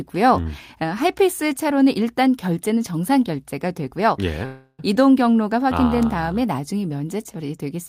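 Speech clip with a call audio freeze from 4.45 to 4.94 s: the last sound is stretched into a fading buzz for about 333 ms, then the speech resumes exactly where it broke off, nothing lost but running 333 ms later. Likely cause: delayed packets emptied the jitter buffer.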